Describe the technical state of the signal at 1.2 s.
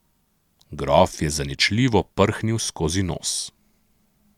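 At 1.2 s the speech signal is intact, with no dropout, distortion or other fault audible at that moment.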